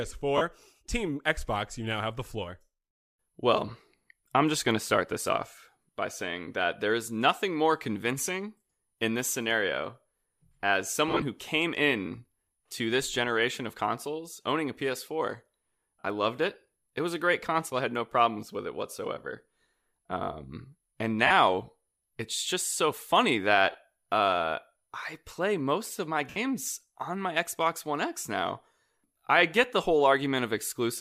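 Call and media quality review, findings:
Lost LE Audio frames: 0.37–0.42 s, 11.08–11.22 s, 16.00–16.04 s, 21.27–21.31 s, 23.72–23.75 s, 26.29–26.36 s. Brief noisy smears in the speech, where the LC3 decoder concealed gaps by replaying the last spectrum with random signs.

Gap lengths 22.5–97.5 ms, fitting 7.5 ms frames. The 11.08 s event is several short dropouts spread over 135 ms, longest run around 30 ms.

Lossy compression only slight, codec not identifiable.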